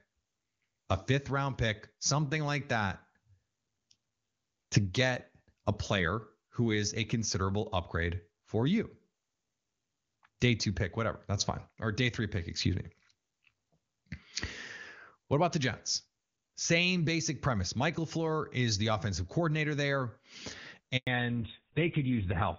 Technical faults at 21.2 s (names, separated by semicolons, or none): fallback to narrowband